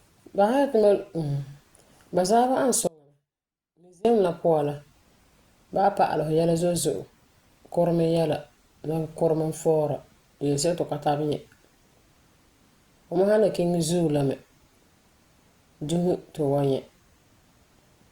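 Speech. The feed likely broke while the path stayed live, causing an audio dropout to a faint residue: from 2.87 to 4.05 s, only a faint leak about 30 dB down remains before "la puan".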